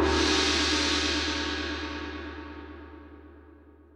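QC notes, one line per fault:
No technical faults were found in the signal, and the level, continuity and channel behaviour hold steady across the whole clip.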